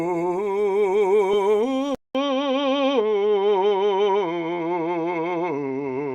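A music clip with two faults. At 1.33 s, repeated frames replay one 20 ms block, a brief stutter, visible as a duplicated waveform segment. From 1.95 s, a 200 ms gap is followed by dull, band-limited sound, with a spectrogram cut off sharply at 6 kHz and a faint noise floor roughly 45 dB down. This is likely an input switched to a poorer device.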